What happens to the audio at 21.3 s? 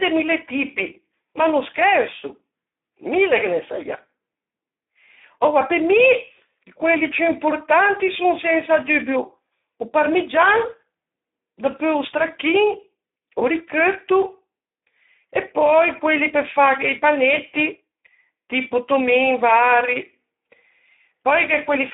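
At 21.3 s the Speex codec damage is still present, as it is throughout the clip. Too few bits reach the excitation, which suggests a low setting near 8 kbps. The speech sounds hoarse and noisy, squeezed into about 250 Hz to 3.7 kHz, with nothing above 3.8 kHz.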